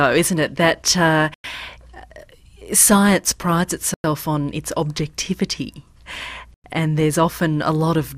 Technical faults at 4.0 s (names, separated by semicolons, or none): gap between chunks